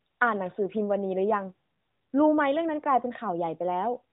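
No technical faults can be heard in this speech.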